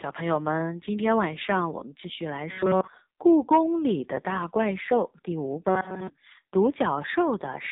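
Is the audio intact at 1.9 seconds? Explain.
No. At 1.9 s, as throughout, the speech passes through an AMR narrowband mobile codec whose heavy compression fits a rate near 5.9 kbps. The vocal-tract model rebuilds the speech from sparse pulses, so it sounds buzzy and synthetic, with nothing above 3.8 kHz.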